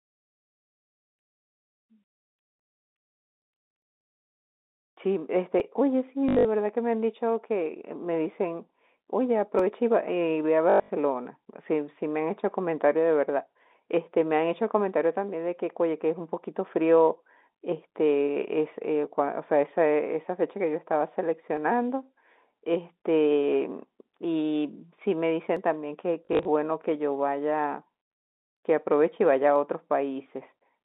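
The speech passes through G.711 telephone coding, and at 5.6 s there is a tiny skip. This is likely audio missing between chunks: the recorder drops a few milliseconds as it closes one 4-second block and opens the next, and the two edges are joined with no silence between them.

From 6.29 to 6.45 s comes packet loss with the last packet repeated. About 140 ms of audio goes missing, scattered over 160 ms with a longest run of 80 ms. The receiver replays the previous packet to fill each gap, which fits 20 ms packets. The loops don't line up with the pitch, and the passage buzzes into a short robotic stutter.

The chunk skip returns at 9.59 s. A longer stutter follows from 10.70 to 10.90 s, with 180 ms lost and runs up to 100 ms. Further skips come at 21.57 and 25.57 s. A lighter stutter runs from 26.25 to 26.45 s, with 100 ms lost and a longest run of 40 ms. A final skip at 29.56 s keeps the steady four-second spacing.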